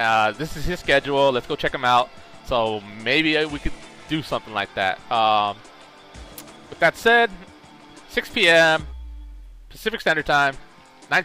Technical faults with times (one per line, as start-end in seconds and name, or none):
none